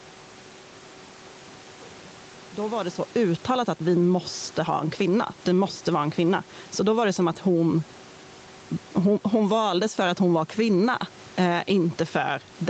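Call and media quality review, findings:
Gain pumping, throughout the clip. Gain ducks by roughly 10 dB under each loud stretch of speech. Likely cause is input gain set far too high, with a fast limiter clamping every peak, squashing loud and soft parts together.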